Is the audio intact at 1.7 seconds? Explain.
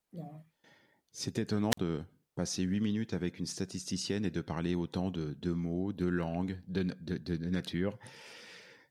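No. A wireless microphone squelch dropout runs from 1.70 to 1.78 s. The radio signal fades, so the receiver's squelch mutes the output. Hiss rises briefly, then there is a 45 ms hole of near silence before the speech returns on "passer huit minutes avec".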